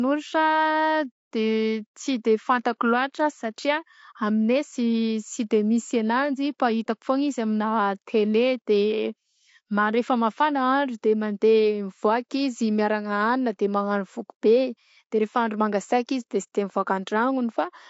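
Throughout, the speech is plainly rough and grainy, with noise between harmonics, likely from low-delay AAC compression whose short frames are starved, fitting about 32 kbps.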